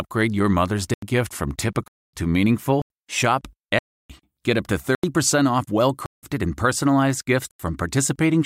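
Blocks of digital silence cut into the speech at 0.94, 1.88, 2.82, 3.79, 4.95, 6.06 and 7.51 s. Output buffers likely went unfilled and were zeroed. Most holes last 85 ms, which fits a 4096-sample buffer. Those at 1.88, 3.79 and 6.06 s run 256, 309 and 171 ms. Each hole cuts the sound out and back with no fade.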